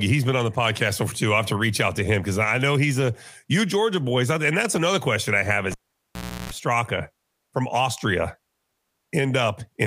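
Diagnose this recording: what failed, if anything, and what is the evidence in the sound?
The fault is in the analogue wiring: a cable was pulled and plugged back in while live. Right after "another question I have", a pop at 5.71 s cuts the signal to near silence for about 0.74 s. A burst of 60 Hz mains buzz lasting about 0.33 s follows as the plug's tip makes contact before the ground sleeve seats. The audio returns with a second pop at 6.51 s.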